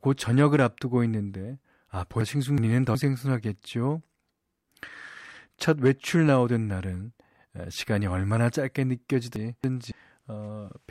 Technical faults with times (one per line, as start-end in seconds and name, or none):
2.21-2.95 frames out of order
9.36-9.92 frames out of order